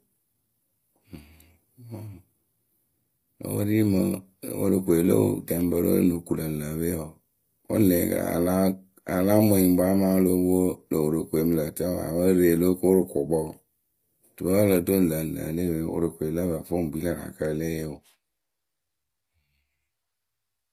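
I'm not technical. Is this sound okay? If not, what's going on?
No, not quite. From start to finish, the speech has a plainly gritty, artificial edge, most noticeable on s and sh sounds, which come out metallic or lispy, and there is nothing at all above about 15.4 kHz. This is likely HE-AAC compression, a space-saving format that stores only the lower part of the sound and fakes the treble by copying lower pitches upward, so the top end doesn't quite match the real thing.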